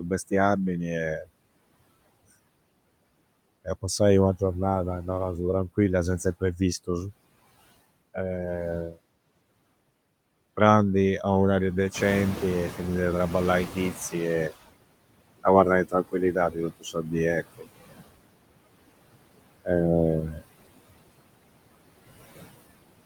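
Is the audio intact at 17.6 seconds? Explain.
No. From 17.58 to 17.68 s, about 100 ms, there is speech cut by the noise suppressor. It mistook part of the speech for steady background noise and turned it down by about 14 dB at the deepest point, so the sound there is swallowed and faint. On a waveform this is a brief dip in amplitude, and a spectrogram shows a short vertical band of weakened energy across the speech harmonics.

That moment also carries the noise suppressor artifacts that run through the whole clip. Frame by frame, the suppressor pulls down the bands it judges to be noise by about 21 dB, and the room noise, which rose near 12 s, now sits about 13 dB below the speech. On a spectrogram the leftover noise shows as patchy, speckled energy between speech regions rather than a smooth noise floor.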